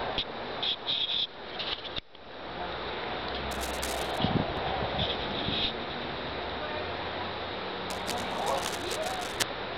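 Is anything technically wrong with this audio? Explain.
Yes. From 3.51 to 4.18 s, and more loudly from 7.9 to 9.43 s, scratching and rustling bursts sit over the sound, at about −10 dB and then about −5 dB relative to it. This is cable scratch noise, likely from a worn cable or connector being moved so its contact resistance fluctuates rapidly.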